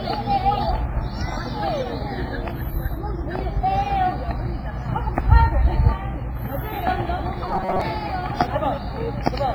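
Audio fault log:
throughout: WMA compression. The whole clip sounds ringing and washy, with a hiss that swells and fades along with the sound. Quantisation noise is smeared across long transform blocks and weak detail is dropped, which fits a low-bitrate encode of about 24 kbps, likely WMA version 1.
7.48 to 7.81 s: robotic sound from repeated short buffers. The sound turns into a rigid metallic buzz at 188 Hz. A slice about 5.3 ms long is repeated to fill gaps, and roughly half the audio is skipped. This is likely from audio arriving too seldom.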